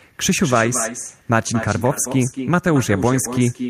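Throughout the speech, an echo with no canceller trails every phrase by roughly a fifth of a second, about 11 dB quieter and thinner. The far end's loudspeaker feeds its microphone, returning the voice uncancelled. Spectrograms show faint, delayed duplicate syllable shapes; waveforms show smeared tails.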